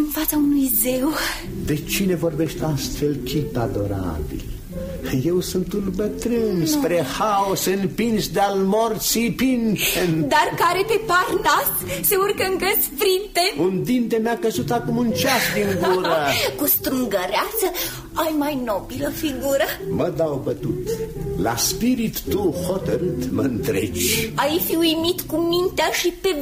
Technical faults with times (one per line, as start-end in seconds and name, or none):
none